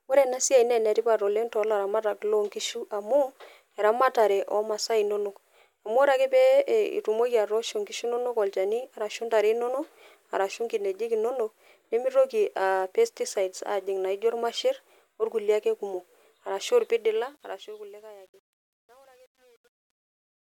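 Speech, ending in a fade-out from around 17 s: truncation distortion on the fade from 16.87 to 20.47 s, worst after 17.51 s, where the level stage drops undithered low bits, consistent with roughly 9-bit resolution, so the quiet tail turns gritty.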